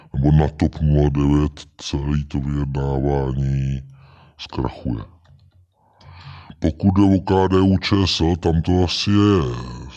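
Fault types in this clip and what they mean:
Wrong sample rate: The samples are being clocked out slower than they were captured, with no resampling in between, and the two-thirds speed and pitch ratio fits 48 kHz material played at 32 kHz. Because timing and pitch are tied to that clock, the speech throughout runs at 0.667 times its natural speed and sits about 7 semitones lower, so every voice sounds deep, drawn out and sluggish for the whole clip.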